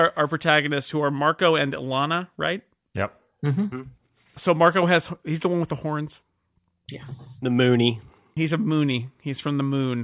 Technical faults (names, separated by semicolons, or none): none